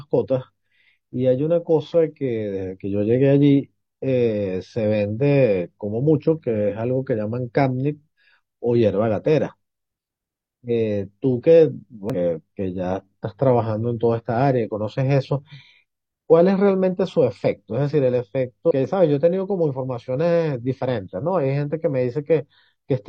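Damaged data in the compressed stream hits twice, at 12.10–12.15 s and 18.67–18.71 s: the decoder misreads corrupted frames, loses sync, and spits out brief glitches.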